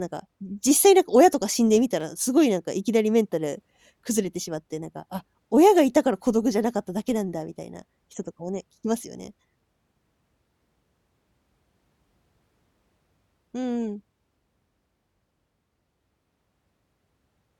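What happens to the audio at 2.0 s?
A single sharp click cuts through the speech at 2.01 s, too brief to remove any audible sound, and visible as a thin vertical line across the spectrum. The likely cause is dropped samples: only a tiny stretch of the stream, a fraction of a millisecond, went missing, so the waveform leaps straight from one value to a later one. That abrupt step in the signal is what produces the click.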